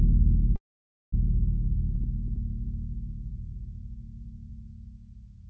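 A call audio freeze runs from 0.56 to 1.14 s in this music clip. The audio most likely stalls because packets arrive late and the jitter buffer empties. A brief fading fill gives way to roughly half a second of silence, then the music resumes where it stopped, about 0.57 s later. Throughout, nothing sounds above 8 kHz, which fits a wideband call codec.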